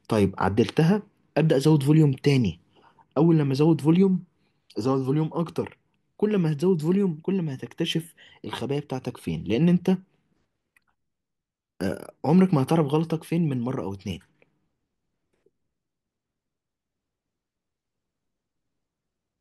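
Nothing technical goes wrong in this speech recording; there's simply no fault to point to anywhere in it.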